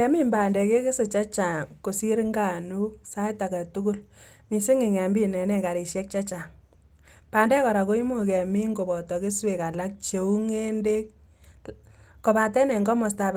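No technical faults occur at any point in this recording, so there is nothing to place in time order.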